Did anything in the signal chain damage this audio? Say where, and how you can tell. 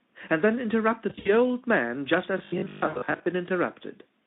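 Yes, at the network stage: VoIP packet loss concealed by the speech codec. Sound smears into a fading buzzy tone or coloured noise at 1.09–1.32 s (about 100 ms missing, 60 ms longest gap) and 2.87–3.02 s.

The driver or buffer stage gives a robotic sound from repeated short buffers, from 2.38 to 3.26 s. It's a rigid 50 Hz buzz over most of that stretch, likely from 20 ms chunks being looped.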